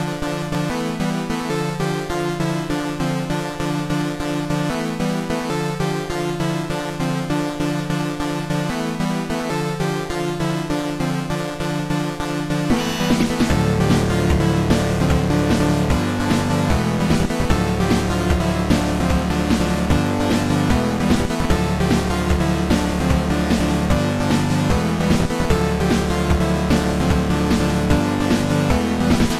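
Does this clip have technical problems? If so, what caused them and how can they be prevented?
No, the signal holds steady throughout, with no technical problems to trace to a cause or prevent.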